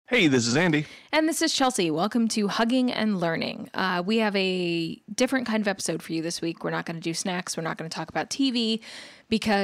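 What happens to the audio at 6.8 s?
At 6.8 s the speech carries straight through without any dropout, click, distortion or other audible fault.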